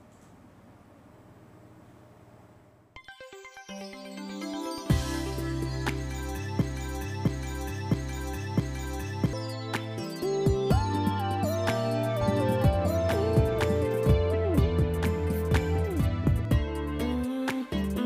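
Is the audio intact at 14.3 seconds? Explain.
No. At 14.3 s the audio has a doubled audio track, running from 12.21 to 16.45 s. A second full-band copy trails about one and a half seconds behind, about 5 dB quieter, with no decay. It likely comes from a slower capture path or a misaligned edit.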